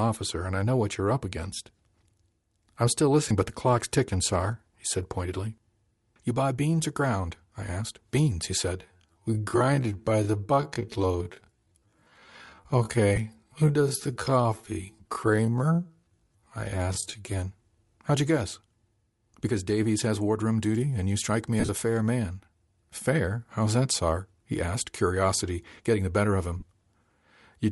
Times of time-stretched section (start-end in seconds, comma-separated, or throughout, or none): 8.74-17.36